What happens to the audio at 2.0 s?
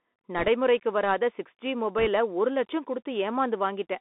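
At 1.98 to 2.07 s, after "சிக்ஸ் ஜி" and before "ஒரு லட்சம்", bit errors on a Bluetooth voice link add rushing crackle. Roughly one to two percent of bits flipped. Each error fades quickly, so no loud clicks.

The CVSD headset codec runs throughout. Its narrowband link confines the speech to roughly 250 Hz to 3.6 kHz. This gives scratchy s sounds and a granular hiss, and its damage is plainly audible.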